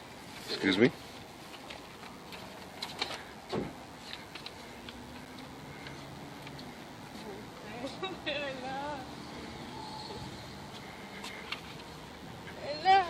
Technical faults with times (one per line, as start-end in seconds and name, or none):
0.00-13.10 DECT cordless phone buzz
5.25 gap between stream segments